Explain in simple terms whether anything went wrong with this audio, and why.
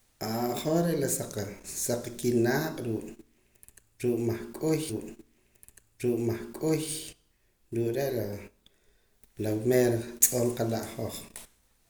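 A stream segment repeated at 4.89 to 6.89 s: the speech jumps back and plays the same two seconds again, with a small blip at the jump. The player fetched or queued that piece of the stream twice, adding two seconds of repeated audio.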